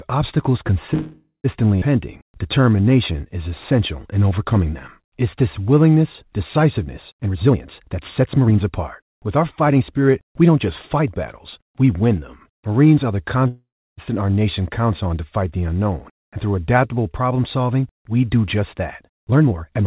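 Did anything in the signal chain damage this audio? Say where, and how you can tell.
Yes. The damage sits in the network and jitter-buffer stage of a call path. The G.711 mu-law coding itself shows only its usual band limit, with nothing above 4 kHz on a spectrogram.

Call audio freeze at 0.94 to 1.46 s and again at 13.48 to 14.00 s. Each time about half a second of sound is inserted. The last sound carries on as a fading buzz, decaying to silence for roughly 120 ms in the first and 320 ms in the second. Afterwards the audio resumes exactly where it stopped. On a spectrogram this shows as a smeared, thinning continuation of the preceding harmonics, then a blank band. The likely cause is packets delayed in transit, draining the jitter buffer.

Skip ahead at 1.8 s. Right after the first freeze, playback jumps forward with a gap of only about 16 ms. Roughly 150 ms of sound is gone, and the two sides are butted almost directly together. 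The waveform shows an abrupt change of envelope with no pause between. A stretch of audio was dropped while later audio was already waiting, so the content simply leaps.

Jitter buffer slow-down from 2.22 to 3.49 s. The sound runs at about 89% speed with unchanged pitch, drawn out, with about 153 ms added. On a waveform, individual pitch cycles repeat back-to-back. On a spectrogram, harmonics stretch horizontally while their spacing stays constant. The buffer was rebuilding its reserve by duplicating single pitch periods many times over.

Jitter buffer speed-up from 7.19 to 10.49 s at about 115% speed, and from 19.08 to 19.85 s at about 148%. Pitch stays put but the sound is hurried, markedly so near the end. About half a second is removed in the first stretch and roughly 0.4 s in the second. The spectrogram shows compressed syllable timing with normal harmonic spacing. The buffer was trimming excess delay by cutting out pitch-period-sized pieces.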